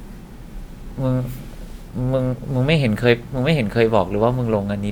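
A speech recording with nothing technically wrong with it.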